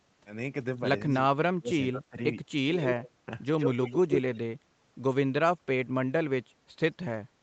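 From 1.05 to 2.19 s the talker keeps ducking away, in patches adding up to maybe 0.7 s, with the deepest dip about 30 dB down. That's speech suppressed in double talk, most likely: the echo canceller heard both ends at once, couldn't tell its own talker from the loudspeaker echo, and pulled everything down. A smaller dip of about 15 dB follows at 2.46 to 2.54 s, and a deeper one of about 25 dB at 2.97 to 3.27 s.

Overlapping that last dip, from 2.74 to 3.1 s, a second copy of the voice trails the original by 128 ms, about 5 dB under it. That's echo leak, likely from a loudspeaker end whose canceller let part of the pickup slip back. It returns from 3.58 to 4.38 s, this time about as loud as the talker. Over all of it the band tops out at 8 kHz, as the Opus call path delivers it.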